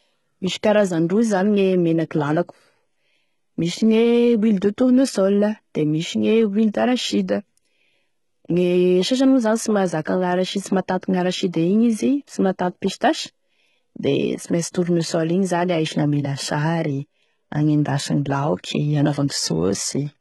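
Throughout the speech, the signal has most likely passed through HE-AAC compression at a very low rate, consistent with about 16 kbps. The encoder kept only the lower spectrum and synthesised the treble by copying lower bands upward under a coarse envelope, and nothing survives above 11.8 kHz. The damage is heavy: the top end sounds false, with gritty, metallic, lispy s sounds where the replicated harmonics fail to line up with the real ones.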